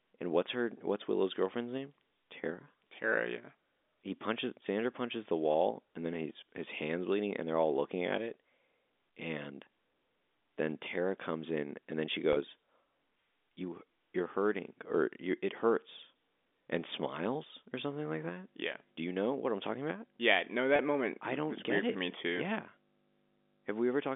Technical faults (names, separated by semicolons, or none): packet loss with pitch repetition; mains hum